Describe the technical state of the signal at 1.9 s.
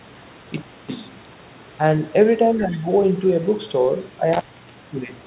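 At 1.9 s the speech is intact, with no dropout, glitch or other fault, only the normal telephone-band sound of the call path, which carries nothing above about 4 kHz.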